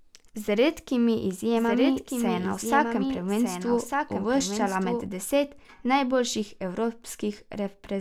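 From 1.54 s to 5.06 s there's a doubled audio track: a second, somewhat quieter copy of the speech trails about a second behind, dry and full-band, cutting in abruptly just before "deset najboljših" and cutting out just as abruptly. Likely a slower second capture path.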